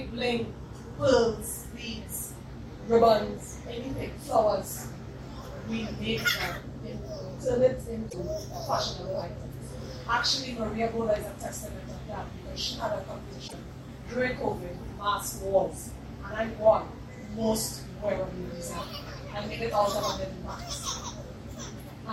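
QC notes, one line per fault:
8.09–8.14 s and 13.44–13.54 s, damaged data in a compressed stream: two short bursts, about 56 ms and 96 ms long, where the sound turns into a chirp, squawk, click or short hole. Corrupted bytes in the stream make the decoder misread those frames and lose sync until it finds a valid frame header again. On a spectrogram each shows as a narrow vertical block where the spectrum is disrupted; the waveform shows abrupt discontinuities at both edges.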